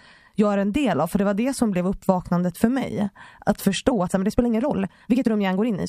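Software likely squeezed the speech from 3.89 s to the end into a time-stretched section running 1.49 times faster at unchanged pitch, so it sounds rushed.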